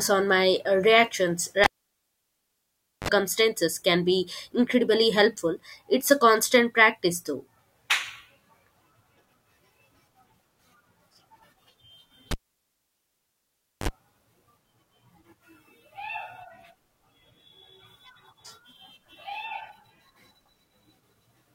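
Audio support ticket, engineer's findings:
Cable pulled and plugged in, 1.64–3.09 s and 12.31–13.89 s. Pop, dropout of about 1.4 s and 1.5 s, then 40 ms and 49 ms bursts of 50 Hz mains buzz as the plug tip touched first, another pop on reseat. Probable component: input connector or lead.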